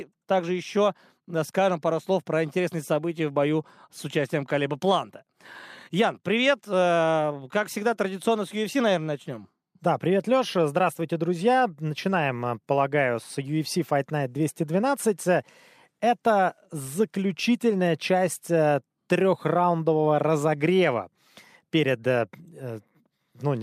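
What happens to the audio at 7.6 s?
Nothing goes wrong at 7.6 s; the speech carries on intact through that moment.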